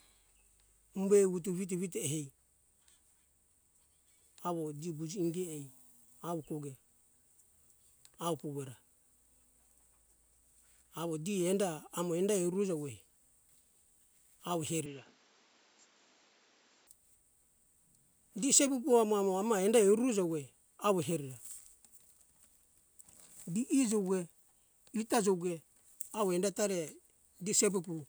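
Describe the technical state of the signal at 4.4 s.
At 4.4 s the speech signal is intact, with no dropout, distortion, glitch or other technical fault audible at that point.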